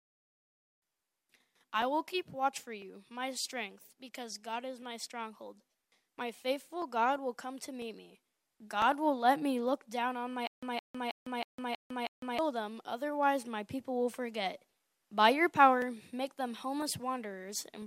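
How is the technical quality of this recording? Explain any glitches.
The recording has one clear glitch, a stutter with silent gaps from 10.47 to 12.39 s. A short burst of about 165 ms plays, drops into roughly 154 ms of dead digital silence, then the same burst returns, repeating six times at an even period of about 320 ms. The likely cause is a stalled player or stream that replays its last buffered fragment at each retry before running dry, so the audio that should have filled that stretch never arrives.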